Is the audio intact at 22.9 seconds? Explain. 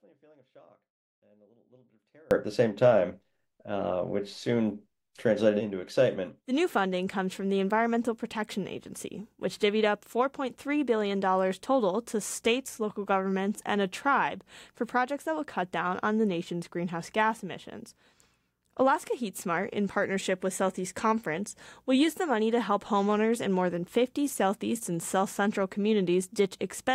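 Yes, at 22.9 seconds the audio plays through cleanly, with no dropout, click, distortion or other fault at that point.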